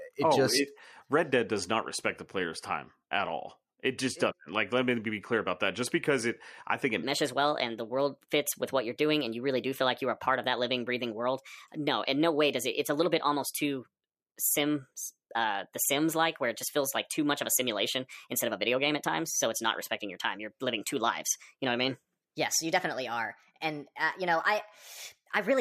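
From 7.03 s to the end at 25.60 s, the speech suddenly turns higher and more hurried, lifted by about four semitones and running 1.28 times faster than the opening. Pitch and tempo shift together at that instant, which marks it as a section at the wrong speed. The likely cause is that this stretch was played back or resampled against the wrong clock, so it runs fast throughout.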